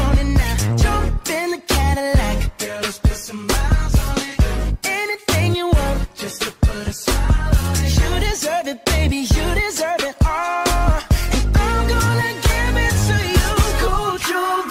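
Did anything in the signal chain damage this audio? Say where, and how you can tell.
No, nothing in the signal chain has left an audible mark on this audio. No stage, from capture through conversion and transmission to playback, shows any sign of having altered the sound.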